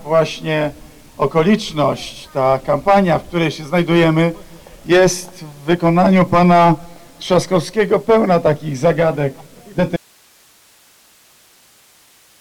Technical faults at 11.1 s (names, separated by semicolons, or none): audio dropout to a faint residue